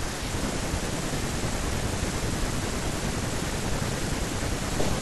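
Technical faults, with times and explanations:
3.68 s, dropped buffer (overrun): an abrupt jump in the speech, likely samples overwritten before being read, skipping about 10 ms without silence.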